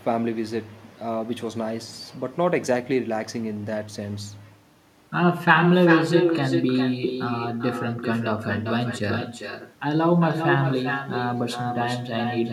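From start to finish, echo with no canceller: each phrase returns about 6 dB quieter, roughly 0.4 s later, as a distinct thin copy rather than smeared room reverberation.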